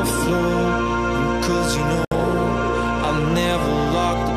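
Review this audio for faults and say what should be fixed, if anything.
A gap at a join of encoded pieces opens from 2.05 s to 2.12 s, a 67 ms silence where separately encoded segments were joined with each run's start delay and final-frame padding left in. The sound then resumes where it stopped. On a waveform it appears as a flat-line hole with smeared edges. On a spectrogram it is an empty vertical stripe across all frequencies. Trimming encoder delay and padding from every piece before joining, or encoding the material in one pass, prevents it.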